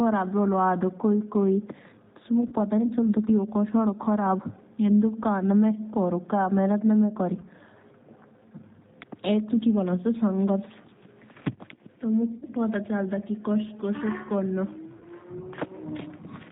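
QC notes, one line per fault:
throughout: G.729 codec. Speech sounds rough and slightly synthetic, with nothing above 4 kHz. The 8 kbit/s model rebuilds the voice from a filter and a few pulses.
2.48–2.55, 7.41–7.47, 12.38–12.45, 14.97–15.04 s: VoIP packet loss concealed by the speech codec. Gaps of 40, 20, 40 and 40 ms, fitting two, one, two and two lost packets. The decoder stretches the last sound into a fading buzz, and it stays weak briefly afterwards.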